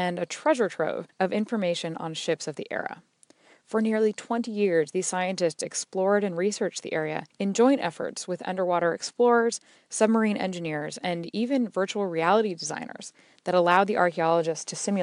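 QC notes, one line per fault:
0.69–13.77 s: clock slip clicks, about ten faint regular ticks roughly every one and a half seconds after "a treasure", likely single-sample slips between unsynchronised clocks some 20 ppm apart.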